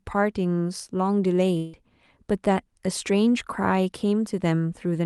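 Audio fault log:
1.57 to 1.75 s, long network dropout: the speech cuts out for about 0.18 s, with the receiver stretching the last sound into a short fading buzz rather than going fully silent, then picking up again with that slice gone. Likely packets lost in transit, concealed by the Opus decoder.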